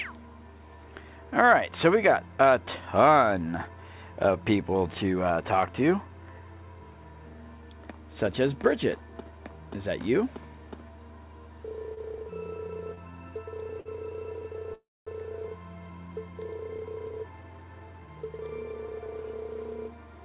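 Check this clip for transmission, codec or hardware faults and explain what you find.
Four faults turn up, all between 11.9 and 15.1 seconds, and they come from delivery over the call link. Their band stops at 4 kHz, which fits a G.711 mu-law path at 64 kbps.

Short stalls from a late packet occur at 11.94 to 11.99 s, 12.95 to 13.13 s and 13.80 to 13.88 s. At each one a sound hangs on too long, with a slight buzz or dip, for about 27 ms, 23 ms and 55 ms respectively. When a packet arrived late, the jitter buffer emptied, so the receiver stretched the last sound until the packet turned up and then carried on from the same point. Nothing is lost, but the timing slips by those amounts.

The call audio freeze runs from 14.74 to 15.09 s. It sounds like a brief held buzz or hiss that fades out, then about 250 ms of silence before the audio resumes. In total about 330 ms is filled in. The likely cause is a longer hold-up of packets in transit that drained the jitter buffer. 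The receiver kept extending the last sound until it died away, then picked up exactly where it had stopped. The result is an inserted pause rather than lost audio.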